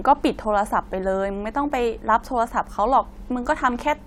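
No technical faults are audible.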